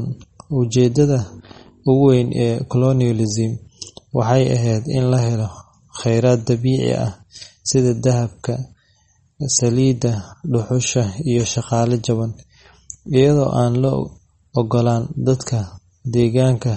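From start to finish the speech carries plainly audible MP3 compression damage, likely from an encoder starved of bits, which fits a rate near 32 kbps. Nothing survives above about 8.4 kHz, where the encoder cut the treble. Weak frequency lines drop in and out from frame to frame, giving a watery, swirling texture with metallic chirps on s sounds. That flickering sets it apart from a simple low-pass filter, which dulls the top without any swirl.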